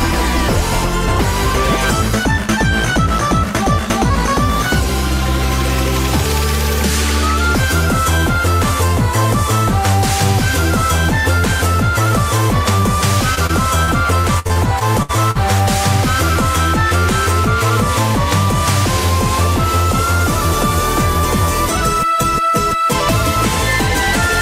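Repeated packet loss (robotic sound) runs from 13.35 to 15.37 s. Audio kept arriving late or not at all, and each hole, the longest 66 ms, was patched by extending the preceding sound. About 0.3 s goes missing, leaving choppy fragments.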